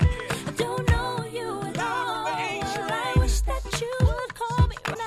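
A broken MP3 bit reservoir is the likely cause of the disturbance from 4.93 to 4.96 s, near the end of the audio. The sound briefly garbles and skips ahead for about 28 ms, roughly one frame, which fits MP3 frames of about 24 ms. MP3 frames store part of their data in space borrowed from earlier frames. Once frames were dropped, the next frame read back into bytes belonging to a different frame and decoded garbage before recovering.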